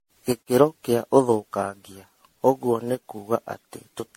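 Generation loss runs through the whole speech clip. It sounds swirly, hollow and smeared, and attacks blur. Nothing sounds above 16.5 kHz. This likely comes from repeated MP3 encoding, about ten times, at a rate that fits 64 kbit/s. Each pass adds fresh noise and spectral holes.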